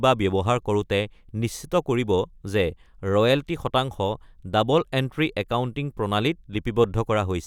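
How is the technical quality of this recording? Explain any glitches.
The recording holds steady throughout, with no glitches, dropouts or other technical faults to explain.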